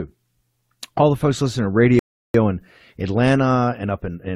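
At 1.99 s the speech drops to silence until 2.34 s, then resumes exactly where it stopped: a rebuffering stall, the player starved of downloaded audio, adding about 0.35 s.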